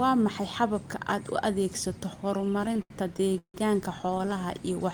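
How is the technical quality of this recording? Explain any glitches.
The recording has repeated stalls (stutter) in two stretches, from 2.37 to 3.56 s and from 4.02 to 4.37 s. Packets arrived late, so the jitter buffer kept running empty, and the receiver stretched the last sound to bridge each wait. In the first stretch the holds last up to 160 ms and fill about a third of it. Nothing is lost, but the speech drags and stutters. In the second stretch the holds are briefer, up to 11 ms.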